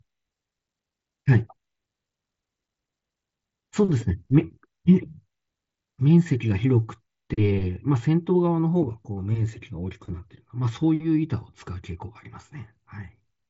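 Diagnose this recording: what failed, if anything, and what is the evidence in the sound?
Nothing in this recording failed. The speech carries the signature of a working Bluetooth mSBC headset link, with the band stopping at about 7.7 kHz and only a light codec grain on the louder passages.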